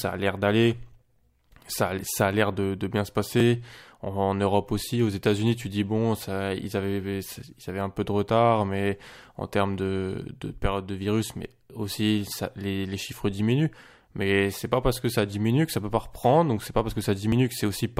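A dropped buffer (overrun) at 3.40 s, just after "l'air de bien se", and again at 17.32 s, after "donc c'est pas parce", is heard as a jump where the speech skips ahead by roughly 30 ms with no gap, likely because samples were overwritten before being read.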